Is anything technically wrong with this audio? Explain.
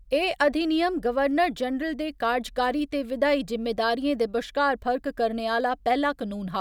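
Yes. Dropped samples occur at 1.31 s, just before "जनरल दे", at 2.79 s, just before "ते विधायी", and at 5.60 s, just after "दे बश्कार फर्क करने". Each is a single sharp click in the speech. The likely cause is a handful of samples, a fraction of a millisecond, missing from the stream. The waveform jumps abruptly to a later value, producing a brief broadband tick while no sound is lost.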